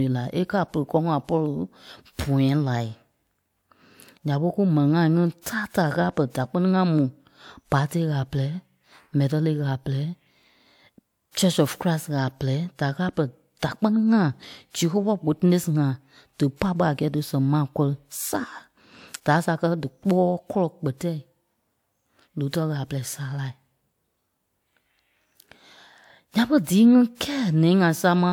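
At 5.41 s, just after "ŋai ŋí" and right before "tàa taa ɣâla pɛrɛ", there's a pre-echo: a short hiss creeps in about 47 ms ahead of the attack. The codec spread its quantisation noise across the whole block, so noise meant for the loud onset leaked into the quiet gap before it. It happens again at 27.15 s, smeared over roughly 55 ms, and both times the attack sounds softened.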